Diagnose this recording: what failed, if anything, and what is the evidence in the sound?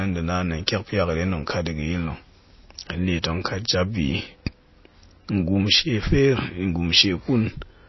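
Codec stage: likely heavy MP3 compression, fitting a 24 kbps stream. Throughout, the bit-starved encoder removes everything above 5.8 kHz and drops weak components, leaving speech audibly watery and swirly.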